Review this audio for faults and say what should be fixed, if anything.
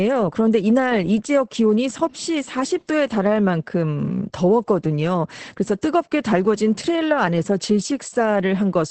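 Opus voice compression affects the whole speech clip. Nothing is heard above 8.5 kHz, so the speech sounds muffled. The coarse SILK coding adds hoarseness and a slightly robotic edge, which fits a bitrate near 10 kbps. To prevent it, encode at a higher Opus bitrate, for example 24 kbps or more for speech.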